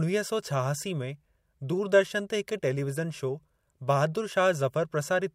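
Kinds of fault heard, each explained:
Nothing stood out on listening to the speech.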